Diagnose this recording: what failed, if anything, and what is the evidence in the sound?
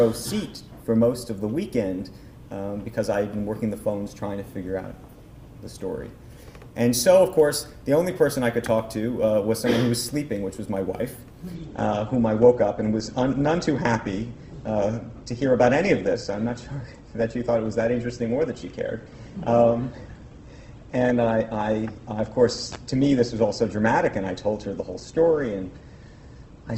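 At 11.54 s the sound abruptly loses its top end, with nothing above 8.2 kHz and a thinner, more artefact-laden texture, without any gap. This is an adaptive stream at a lower bitrate: the network slowed, and the shift fits a switch from a 64 to a 16 kbit/s Opus rendition.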